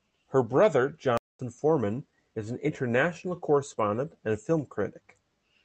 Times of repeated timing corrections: 0.24-5.53

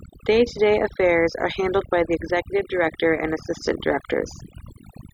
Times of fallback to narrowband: none

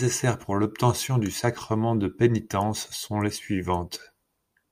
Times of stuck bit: none

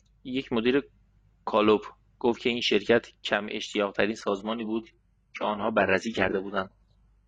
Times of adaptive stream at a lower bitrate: 4.18-7.27

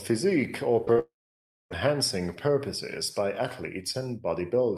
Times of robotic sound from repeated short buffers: none

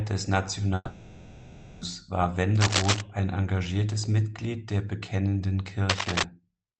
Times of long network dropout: 0.75-1.83

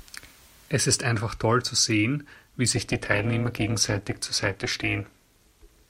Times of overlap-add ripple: 2.76-5.89

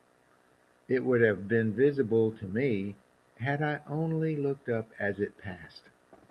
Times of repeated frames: none

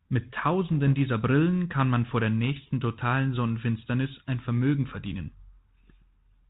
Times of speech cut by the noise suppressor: none

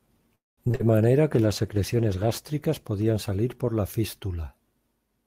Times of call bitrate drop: 1.35-5.26

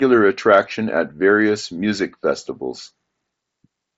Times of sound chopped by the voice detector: none

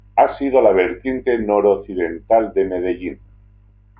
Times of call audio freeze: none

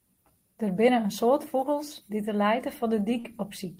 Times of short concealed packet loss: 3.19-3.27

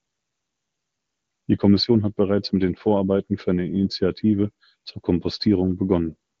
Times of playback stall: none

